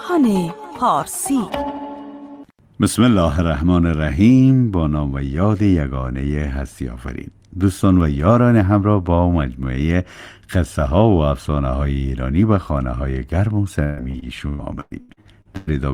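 From 13.83 s to 15.69 s, repeated packet loss (robotic sound) makes the audio choppy: what sounds like about ten dropouts, the longest 134 ms, are each patched by stretching the preceding sound. A spectrogram shows smeared, frozen bands between brief breaks, and the waveform shows stuttering repeated segments.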